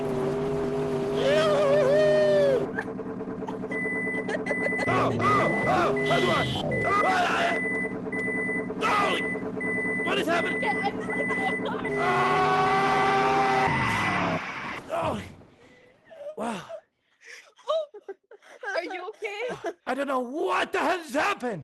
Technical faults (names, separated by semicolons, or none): skip ahead